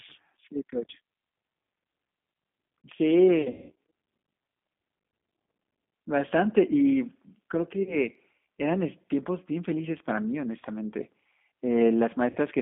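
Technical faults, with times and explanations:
Throughout, G.729 codec: everything is squeezed into roughly 150 Hz to 3.6 kHz and rebuilt at 8 kbit/s from a vocal tract filter, pitch predictor and a few pulses per frame. That's why the speech sounds plainly rough, slightly synthetic and thin at the top.
3.42–3.72 s, 7.83–7.97 s and 12.30–12.38 s, VoIP packet loss concealed by the speech codec: the first gap loses about 240 ms of audio, spread over about 360 ms with a worst run of 180 ms. That fits around eight lost packets. The other two gaps lose 30 ms and 60 ms. In each gap the decoder keeps extending its last pitch and filter and lowers the gain, so the speech smears into a fading buzzy tone or coloured noise. It sounds weak for a moment after packets return.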